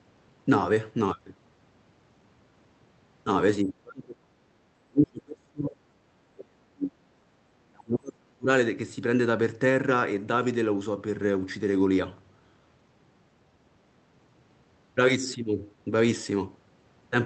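From 3.62 to 7.25 s and again from 7.72 to 8.5 s, the speech drops by up to roughly 40 dB. This is likely speech suppressed in double talk, with the echo canceller turning down both its own talker and the loudspeaker echo.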